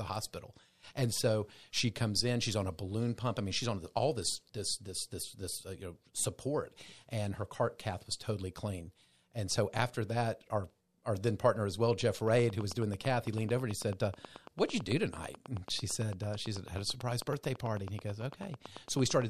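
From 12.28 s right through to 19.23 s there's a train of clicks riding over the speech: a steady ticking at about 9 clicks per second, evenly spaced, so something like seventy near-identical pops in all. They're loud, peaking at around 5 dB above the speech itself, and they carry on through the pauses too. That regular pulse points to a likely cause like interference from nearby equipment or a faulty connection or power supply.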